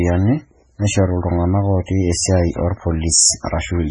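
Throughout, the speech sounds watery and swirly, with nothing above about 10.2 kHz. This is likely heavy MP3 compression at a very low bitrate, around 16 kbps, where the encoder cuts the treble and lets weak frequency lines flicker between frames.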